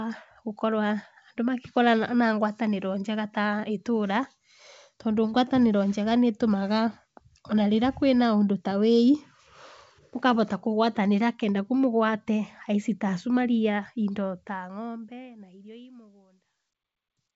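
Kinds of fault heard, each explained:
No faults can be heard: the speech carries the band limit of wideband telephone coding, with nothing above about 7.7 kHz, and the level eases down in a gradual fade-out from around 14 s to 17.4 s.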